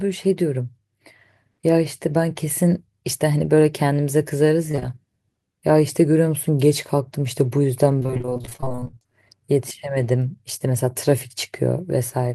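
Speech, hit by three network faults. Three back-to-back short concealed packet losses at 4.71, 4.75 and 4.79 s each left about 20 ms unreceived; the decoder extended the preceding sound, giving a brief smear or wobble. From 7.99 to 9.06 s, repeated packet loss punched 28 gaps of up to 25 ms, with nearly half that span concealed, so the speech turns choppy and robotic with pieces missing. A jitter buffer slow-down follows from 9.07 to 9.46 s, repeating pitch periods to add 52 ms and dropping playback to 89% speed, stretching the speech at unchanged pitch.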